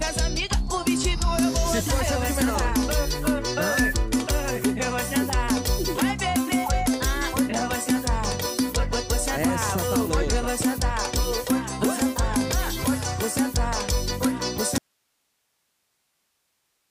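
At 3.51 s a loudspeaker feedback squeal sets in: a single 1.8 kHz tone swells over roughly 0.3 s until it sits about 5 dB above the sound, then stops at 3.94 s. A spectrogram shows one bright horizontal line at 1.8 kHz that thickens as it grows.

From 14.78 s to the end, the audio drops out to a faint residue of hiss around 50 dB below the normal level, likely because the signal was lost while the path after it stayed live. The waveform collapses abruptly to a thin band, and the spectrogram shows only faint broadband noise.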